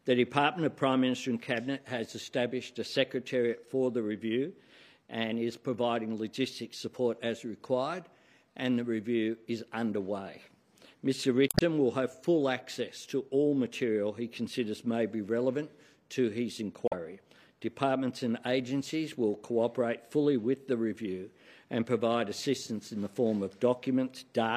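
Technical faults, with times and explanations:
11.46–11.62 s and 16.85–16.93 s, damaged data in a compressed stream: corrupted bytes make the decoder misread frames and lose sync until it finds the next valid header, giving a brief chirp, squawk, click or short hole.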